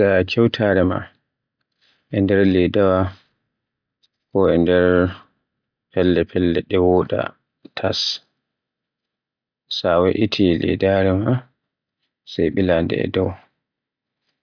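No technical faults can be heard anywhere in it.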